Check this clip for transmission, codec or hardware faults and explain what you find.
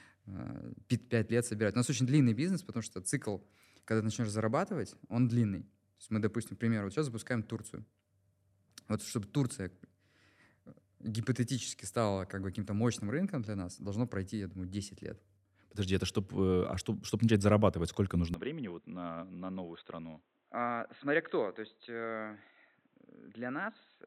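From 18.34 s, after "чтобы начать зарабатывать сколько", the speech abruptly turns dull and quieter, cut off above 4 kHz, likely because the input switched to a poorer device.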